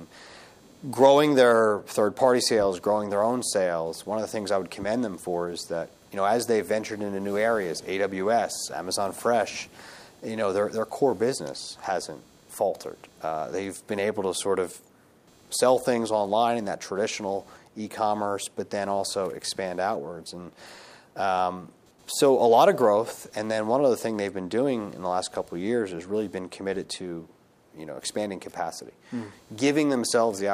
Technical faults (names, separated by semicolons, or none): computer activity noise